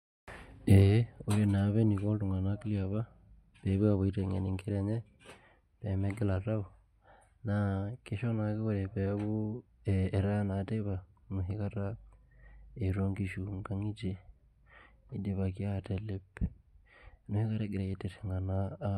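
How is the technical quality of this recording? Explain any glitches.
No glitches or technical faults can be heard anywhere in the recording, so there is nothing to explain.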